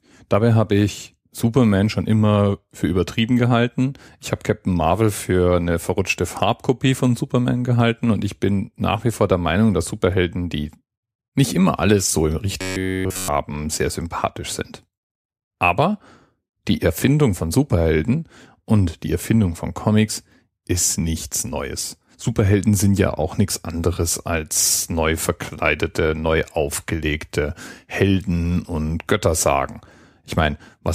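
From 12.61 to 13.28 s the speech turns into robotic sound from repeated short buffers. The whole span is likely filled by looping a fragment of about 10.7 ms, forcing a rigid, metallic buzz at 93.8 Hz that only loosely follows the speech.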